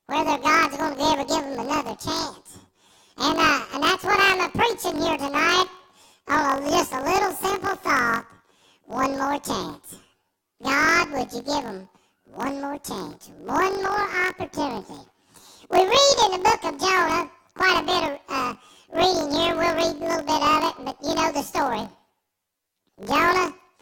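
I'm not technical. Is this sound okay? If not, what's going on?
No. Planar audio read as interleaved, throughout: each 21 ms chunk plays left-then-right at double speed, so speech sounds an octave high, fluttering 47 times a second.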